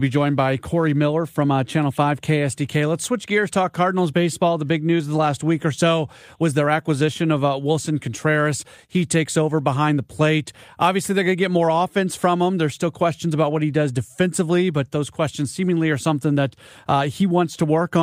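The sender's audio clock runs faster than the receiver's, by around 5 percent, so this speech recording shows clock drift between sender and receiver: the jitter buffer keeps overfilling, and the receiver has to discard short slices of audio to avoid falling behind. Those repeated timing corrections run from 0.09 s to 17.82 s, all cutting in the same direction to match a sender running at 105 percent speed. They are heard as small, unevenly spaced hiccups that leave the pacing slightly unsteady.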